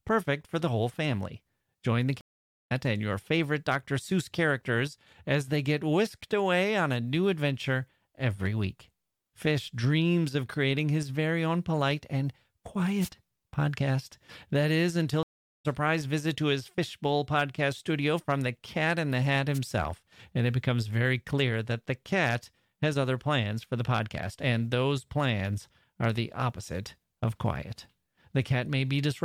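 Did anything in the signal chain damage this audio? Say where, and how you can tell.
Yes. Stream reconnects at the network stage: silence at 2.21–2.72 s and 15.23–15.66 s, after "is until". The audio resumes about 0.5 s and 0.4 s later respectively, at "and your favorite" and "visit to his".

Wireless microphone noise hits at the radio link: brief static bursts at 13.01–13.09 s and 19.54–19.59 s. The RF signal fades and receiver noise breaks through.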